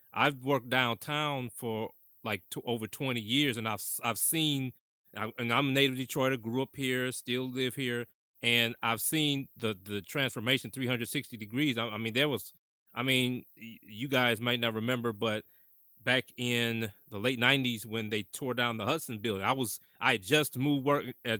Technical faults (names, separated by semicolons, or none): none